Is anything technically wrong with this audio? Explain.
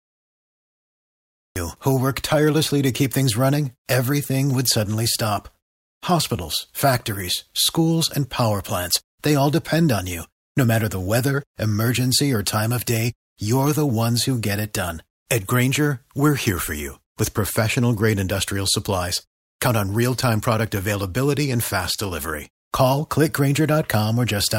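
Yes. For the first 1.56 s there is only dead digital silence, and then the speech bursts in at 1.56 s partway through a sound, with no natural onset or fade. This is a cut-off start: capture or streaming began late, so the opening of the utterance was never recorded.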